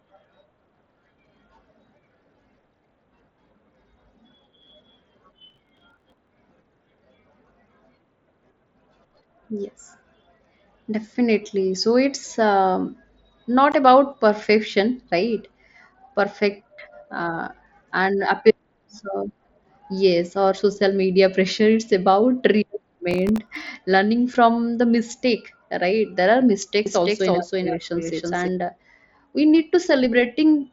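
A speech recording carried over a wideband Bluetooth headset link, with the sound topping out around 8 kHz as the mSBC codec allows, and marred by several faults. From 5.5 to 6.29 s, and again from 23.11 to 23.67 s just before "learning from the mistake", a gritty crackle tears across the sound. This is processor overload crackle: the system repeatedly missed deadlines on very short buffers, around 1.5 ms each, and replayed stale audio with hard edges. At 13.72 s, just before "about perfection right", a 15 ms hole with abrupt edges points to unconcealed Bluetooth headset packet loss, where a couple of lost voice packets were replaced by silence or an idle pattern. From 26.86 to 28.48 s a doubled audio track appears: a dry, full-band copy at roughly equal loudness trails about 300 ms behind and starts and stops abruptly, likely from the same audio being captured again through a slower path.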